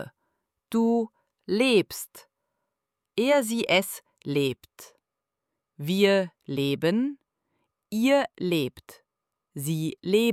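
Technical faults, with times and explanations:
No technical faults are present in this clip.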